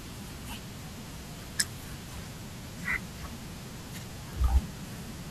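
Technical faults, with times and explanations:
No technical faults can be heard in this speech recording, and the signal holds steady with no interruptions or damage at any point.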